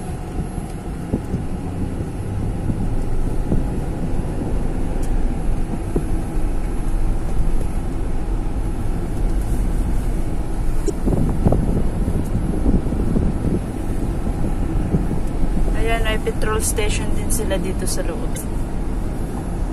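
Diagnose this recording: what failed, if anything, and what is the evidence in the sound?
The failure is at the codec stage: damaged data in a compressed stream. Three brief glitches of about 44 ms each, at 5.79–5.83 s, 10.86–10.90 s and 18.33–18.37 s, are heard as blips where corrupted frames were misread and the decoder lost sync until it found the next valid header.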